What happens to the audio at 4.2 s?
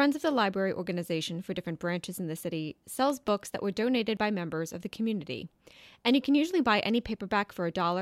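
At 4.17 s, right after "that were donated" and before "by members of the", the speech jumps forward. Roughly 10 ms of audio is simply missing, with no gap of silence, just the two sides butted together. That's most likely a dropped buffer (overrun): the software didn't grab the samples in time, the hardware wrote over them, and the audio skipped ahead by that chunk.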